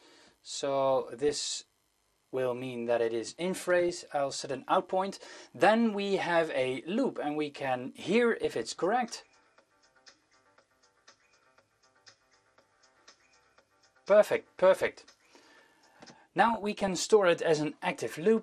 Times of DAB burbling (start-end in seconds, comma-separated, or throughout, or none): 1.21-1.61, 3.79-4.01, 16.41-17.04